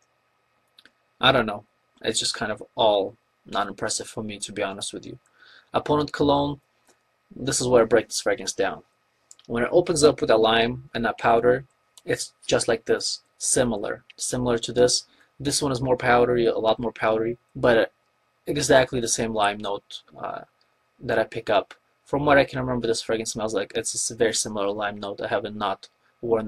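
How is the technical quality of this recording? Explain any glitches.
The technical quality is compromised by one fault that runs through the whole recording.

Overlap-add ripple is present from start to finish. The audio was split into windowed frames and rejoined with an overlap whose windows don't sum to a steady gain, so the level dips and swells about 6 dB once per frame. That happens at a rate of around 200 Hz, which points to a frame hop of roughly 5 ms. At that rate the ripple sounds like a metallic buzz, with added tones flanking each component of the sound. On a waveform, the envelope shows a regular comb-like modulation. On a spectrogram, sideband lines sit about 200 Hz above and below each component.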